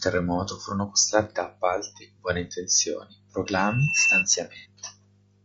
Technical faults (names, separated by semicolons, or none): low-delay AAC compression; loudspeaker feedback squeal; AAC frame loss with concealment